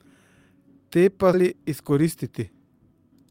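At 1.33 to 1.35 s, a skip ahead drops about 0.7 s of speech and joins both sides directly, with no silence or fill to mark the loss, unlike a dropout. From 1.43 to 2.59 s, a jitter buffer speed-up trims repeated pitch-period slices, removing about a tenth of a second. The speech runs at 109% speed and sounds hurried, but the pitch stays unchanged.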